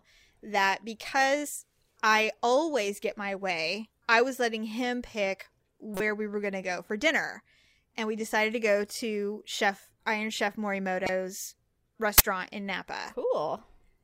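At 5.94 to 6.00 s the speech gets hit by a corrupt frame decoded, roughly two frames' worth. Some bits in the compressed data got flipped, but the decoder played those frames anyway, misreading gains or codes and putting energy at the wrong frequencies for about the length of each damaged frame. You get a short artefact, a chirp, squeak, blip or noise burst, that doesn't belong to the speech.

The same thing happens again at 11.03 to 11.09 s, this time across roughly three frames, so it's a little longer than the first one.

Then at 12.18 to 12.20 s there's an uninitialised buffer. A 20 ms block went out before any audio had been written into it, so whatever was left in memory got played as samples. That comes through as a crack or a brief burst of digital noise dropped straight into the speech.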